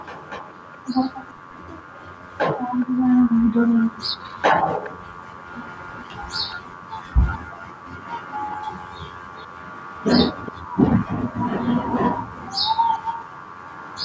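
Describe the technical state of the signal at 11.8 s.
At 11.8 s the speech is intact, with no fault present, only the normal call microphone processing that trims the lowest bass and leaves nothing above 8 kHz.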